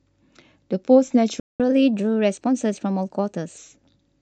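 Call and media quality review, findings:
Playback stall, 1.40–1.60 s: speech drops to silence for 198 ms mid-flow, then resumes. Likely player buffer underrun or blocked audio thread.

Catch-up at higher speed, 1.60–3.58 s: speech hurried and raised roughly a semitone and a half, 1.1x. Player resampling its backlog to recover lost time, then returning to normal rate.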